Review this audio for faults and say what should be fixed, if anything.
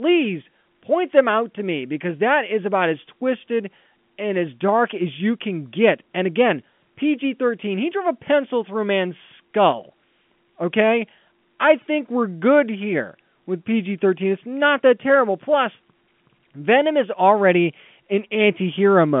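Nothing needs fixing; no faults are audible.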